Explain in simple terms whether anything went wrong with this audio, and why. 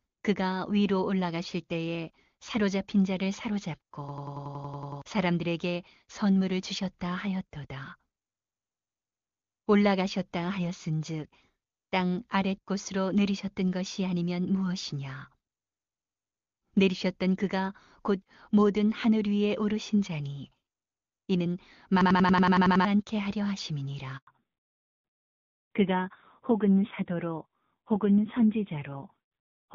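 Three things go wrong in this speech clip.

The first is a system hang loop, which happens twice: from 4.09 to 5.02 s, and from 22.01 to 22.85 s. The computer froze, but the sound hardware kept replaying the last scrap of audio it held. That scrap lasts about 93 ms, which fits a 4096-sample buffer. It repeats about eleven times a second, ten times in the first event and nine in the second, so you hear a rapid machine-gun stutter. Roughly a second of real speech is lost in the first event, and about 0.7 s in the second.

The second is a handover gap, from 24.17 to 24.27 s. The phone switched the call to a different network. For those 100 ms no speech got through, so the sound cuts out briefly to silence. Whatever was said in that moment is gone for good.

The third is a fallback to narrowband, which starts right after the gap at 24.27 s and lasts to the end. Before this point the call used HD Voice, and it sounds clear. 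After the switch, the call moved to an older, lower-quality phone codec. Everything above 4 kHz disappears. The speech turns duller and rougher, like an old landline.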